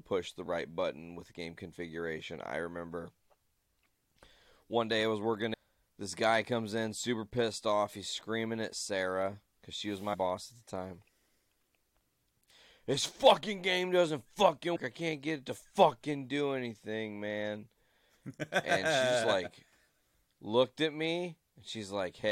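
At 5.53 s, after "day I was working", a short glitch cuts in. The same happens from 10.13 to 10.15 s between "because she was" and "at the time", at 12.49 s, and from 14.75 to 14.77 s between "fucking game doesn't" and "I can't get it". This is damaged data in a compressed stream. Corrupted bytes make the decoder misread frames and resync, so each event is a brief break in the decoded audio.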